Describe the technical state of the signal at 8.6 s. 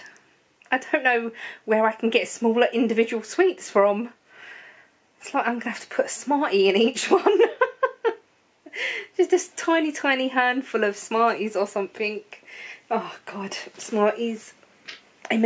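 At 8.6 s the signal is intact, with nothing there to mark it as faulty.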